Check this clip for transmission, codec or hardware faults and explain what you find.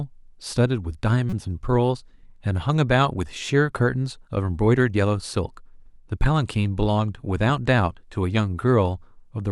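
One fault: a corrupt frame decoded from 1.30 to 1.41 s, where damaged bits misplaced spectral energy across several frames. It sounds like a squeaky burst about 15 dB below full scale and shows as a bright, smeared vertical patch on the spectrogram.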